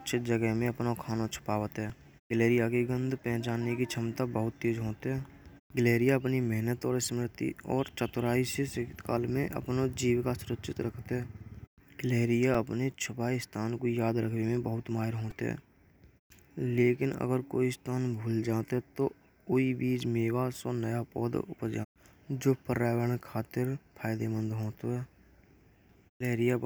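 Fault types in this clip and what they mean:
Repeated buffer: The playback device ran short of fresh audio and sent the previous block out again. Each block here lasts about 2.7 ms, which fits a 128-sample buffer. At 1.90 s and 12.54 s one block plays twice. Each is heard as a single sharp click in the speech. At 15.31 s the block repeats four extra times, giving a brief buzz. Roughly 10 ms of audio is lost there, and only a few milliseconds at each click.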